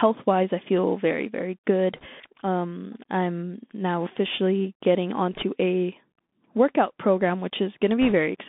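Bluetooth CVSD headset codec, throughout: the speech is squeezed into a 200 Hz to 3.6 kHz line band, which fits 64 kbps CVSD. Its one-bit adaptive steps leave granular hiss, scratchy sibilants and distortion on loud highs.

Bit errors on a Bluetooth voice link at 1.96 to 2.07 s (after "I feel very very"), 5.33 to 5.42 s (between "I'm now officially getting" and "a workout program"), and 8.01 to 8.13 s: at roughly 2, 1.5 and 2 percent error rates respectively, flipped bits each nudge the signal slightly, producing brief rushing crackle rather than sharp clicks.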